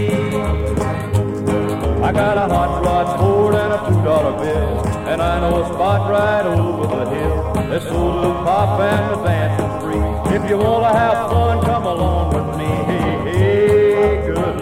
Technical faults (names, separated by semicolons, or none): none